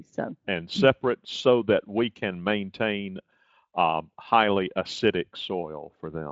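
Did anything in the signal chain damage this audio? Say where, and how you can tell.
No, nothing in this speech stood out on listening as damage from any stage of the chain.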